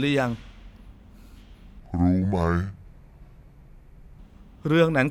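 From 1.80 to 4.19 s, a section at the wrong speed plays the speech at 0.685 times its recorded rate. Pitch falls with it, by about seven semitones. The voice turns deep and dragging. The likely cause is playback against the wrong clock.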